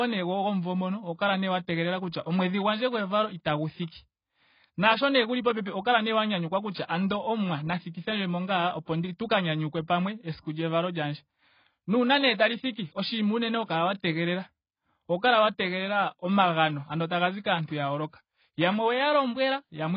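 Throughout, the speech sounds dull and smeared, with nothing above 5 kHz. This is likely heavy AAC compression, and the loss fits a bitrate near 16 kbps.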